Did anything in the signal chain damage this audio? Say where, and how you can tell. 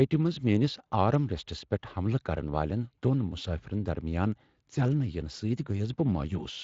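No, nothing in the chain has damaged this speech.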